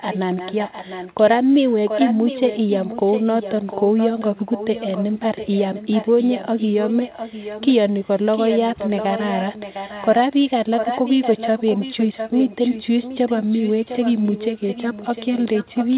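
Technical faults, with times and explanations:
0.08–1.22 s, 1.49–7.75 s, 7.93–8.09 s, 8.32–8.60 s, 8.76–10.50 s and 10.77 s to the end, echo leak: a second copy of the speech trails the original by 705 ms, about 10 dB below it in most runs, about 15 dB in the first and about 40 dB in the brief one at 7.93 s. It is likely a loudspeaker's output reaching the far microphone and getting past the echo canceller. Unlike reverberation's smear, this is a distinct repeat at one fixed lag, band-limited like everything else to 4 kHz by the call codec.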